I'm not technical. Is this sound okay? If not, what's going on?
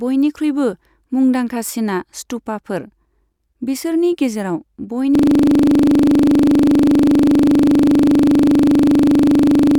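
No. At 5.15 s the speech stops moving forward and a system hang loop takes over until the end. The computer froze while the sound hardware kept replaying the last 40 ms of audio it held, over a hundred times, 25 times a second, which turns into a rough, steady buzz. Unlike a brief stutter or skip, where speech resumes, this never recovers. The same tiny slice repeats with nothing new.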